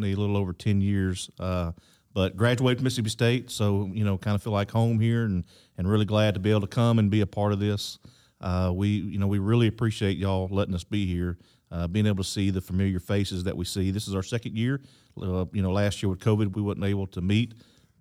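No technical faults turn up anywhere in this speech recording.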